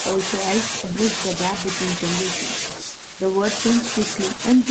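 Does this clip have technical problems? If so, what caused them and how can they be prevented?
No, there is nothing technically wrong with this speech, and the lack of anything above 8 kHz is just the expected band limit of a call codec, not something that needs preventing.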